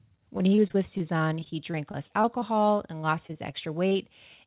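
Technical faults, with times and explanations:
0.38–3.96 s, repeated packet loss (robotic sound): Short holes recur, 22 of them, the longest near 28 ms. Each is patched by extending the preceding sound, covering about 12% of the stretch. The speech turns choppy within the 4 kHz-limited call band.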